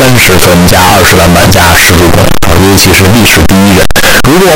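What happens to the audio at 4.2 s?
Float read as integer at 4.2 s, as across the whole clip: 32-bit float samples were likely read as 32-bit integers, so sign and exponent bits set levels, making the speech loud, harsh and nearly square-wave, with noise as loud as the voice.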